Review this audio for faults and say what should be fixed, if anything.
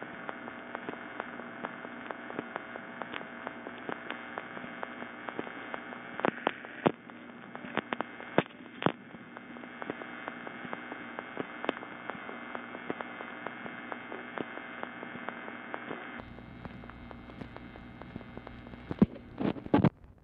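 From 0.0 to 16.19 s the sound is dull and boxy, with nothing above 3.6 kHz, a moderate noise floor and a level a few decibels off. At 16.19 s it clears abruptly, with no gap. An input switched to a poorer device is the likely cause. Lock the recording input to the intended microphone before starting.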